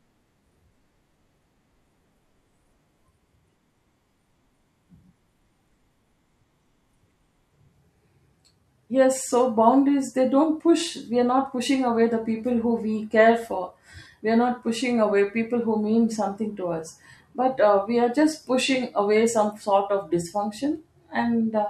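No technical faults can be heard anywhere in the speech. There is nothing to mark at any point in the recording.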